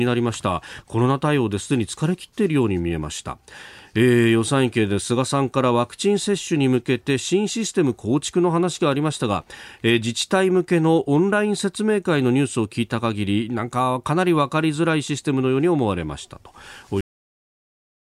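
At 17.01 s the speech stops dead partway through a sound, falling straight to digital silence with no natural decay or room tail, and that silence holds for the remaining 1.1 s of the clip. This is a cut-off end: the final stretch of audio was never written out or played back, so the recording ends abruptly instead of finishing the sound that was under way.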